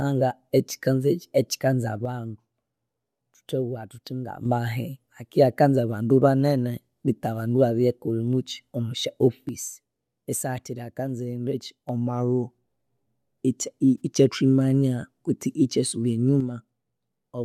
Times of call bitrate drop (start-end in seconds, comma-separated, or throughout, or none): none